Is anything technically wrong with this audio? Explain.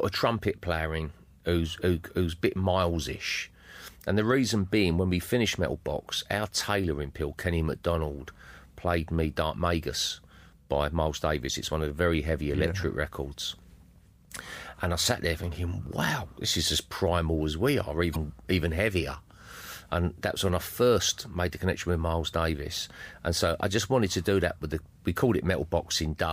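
Yes. The speech has two short bursts of damaged data in a compressed stream: one at 13.33 s and a longer one from 18.12 to 18.16 s. At each point, part of the encoded bitstream is corrupt, so the decoder misreads or rejects those frames, loses sync, and scans ahead for the next valid frame header. Each event sounds like a brief chirp, squawk, click or short hole.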